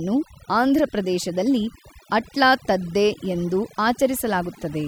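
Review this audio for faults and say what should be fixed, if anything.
Overdone noise removal runs throughout: bands near the noise estimate are cut away, so the background drops away and breaks up into twinkling specks. A spectrogram shows blank gaps dotted with isolated flecks. Prevent it by lowering the reduction strength and checking the result on quiet passages.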